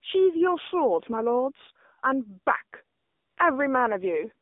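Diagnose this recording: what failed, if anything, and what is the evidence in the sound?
AMR narrowband mobile codec, throughout the clip, at the codec stage. The speech sits in a telephone band of roughly 250 Hz to 3.7 kHz, with nothing above, and carries a plainly audible buzzy, synthetic edge. The codec rebuilds each 20 ms frame from a vocal-tract filter excited by a handful of pulses. At this low bit allocation, which fits the 7.4 kbps mode, the excitation is too sparse to carry natural texture.

AMR comfort noise, from 2.98 to 3.38 s, at the call-processing stage. For 400 ms the real background drops out and a steady, smooth noise takes its place, switching in and out at the edges. The sending side judged the talker silent and stopped transmitting speech frames. The receiver then generated synthetic noise from a coarse description of the background's level and spectrum, rather than passing the actual sound.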